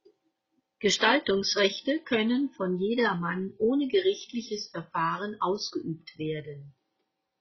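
At 0.96 s the speech drops to a lower-bitrate version of the adaptive stream, with no gap. Everything above about 6.1 kHz vanishes and artefacts thicken, which sounds like a fall from roughly 96 to 16 kbit/s AAC.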